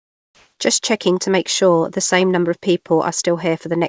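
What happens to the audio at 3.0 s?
Nothing goes wrong at 3.0 s: the speech passes through intact, with only the steady 8 kHz upper limit of the G.722 call path that runs through the whole recording.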